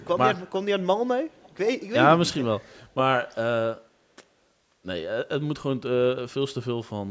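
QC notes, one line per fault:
1.3–1.57 s, echo leak: an echo canceller likely missed some loudspeaker pickup, returning a faint copy of the speech about 0.54 s late, some 30 dB below it.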